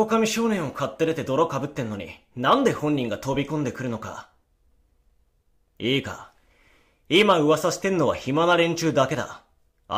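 No technical faults can be heard anywhere in the speech.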